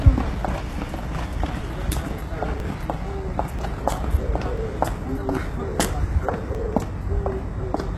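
From start to end, plainly audible codec damage, likely HE-AAC compression. Nothing sounds above 12.3 kHz, and the rebuilt treble turns gritty and metallic, fitting a bitrate near 16 kbps.

Short skips, likely audio missing between chunks, fall at 0.63, 1.61, 2.60, 3.59, 4.58, 5.56, 6.55 and 7.54 s. A sliver vanishes each second, joined without silence.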